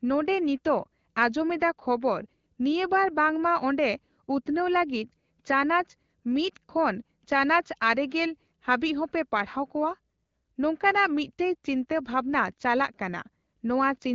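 No technical faults occur at any point in this speech clip, which comes through an AMR wideband (HD Voice) link.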